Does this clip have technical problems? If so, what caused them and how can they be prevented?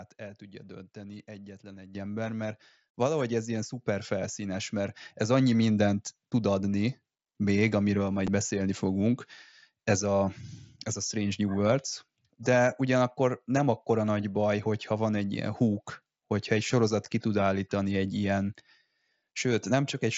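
Yes. Microphone volume stepped up at 1.95 s and 5.01 s: the call software's automatic gain control raised the device input in one jump, about 10 dB and then about 1 dB, so speech and background rise together. Prevent it by disabling automatic microphone level adjustment and setting a fixed input gain.

Unconcealed Bluetooth headset packet loss at 8.27 s and 17.05 s: a single wideband frame on the headset link was dropped and replaced with silence or an idle pattern, leaving a 7.5 ms hole with hard edges in the speech. The working mSBC codec adds a light grain on loud sounds. Prevent it by keeping the headset close to the phone, away from interference, or by using an audio stack with packet loss concealment.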